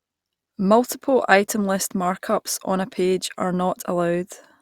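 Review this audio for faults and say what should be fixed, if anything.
Nothing needs fixing: the speech signal stays steady and intact throughout, with no audible faults to correct.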